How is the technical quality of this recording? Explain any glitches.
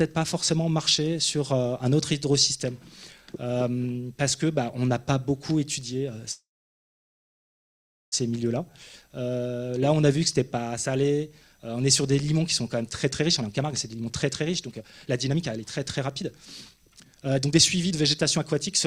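Two glitches stand out: a freeze mid-clip and a hurried stretch at the end.

From 6.31 to 8.14 s there's a call audio freeze. The last sound trails briefly, then about 1.7 s of silence. Likely delayed packets drained the jitter buffer; when they arrived the audio resumed where it stopped, so nothing's lost, just a 1.8 s gap inserted.

From 12.83 s to the end there's a jitter buffer speed-up, running at about 122% with unchanged pitch, so it sounds rushed. The buffer held too much audio, so the receiver kept trimming tiny pitch-period slices, around a second and a half in all.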